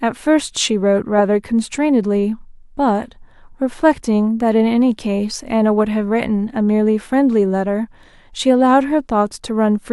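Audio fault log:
Nothing to log here, since this bit of speech comes through without a single fault worth a line.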